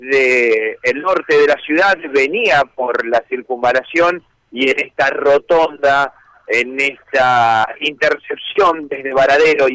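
No technical faults can be heard anywhere in the audio.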